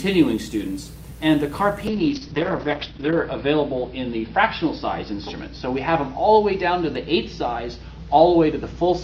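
From 1.89 s to the end, a call bitrate drop cuts the encoder from about 64 kbps to about 7 kbps, bottoming out for 1.3 s. Coarser coding and a bandwidth cut from 20 kHz to 6 kHz leave the sound muffled, rough and watery.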